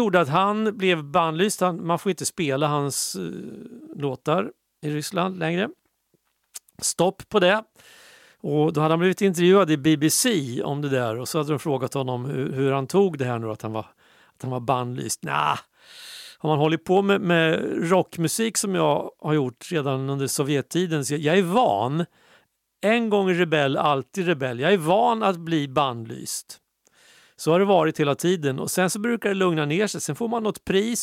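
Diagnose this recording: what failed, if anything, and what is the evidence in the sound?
Nothing in the recording points to a failure at any stage; the speech signal holds steady and continuous throughout.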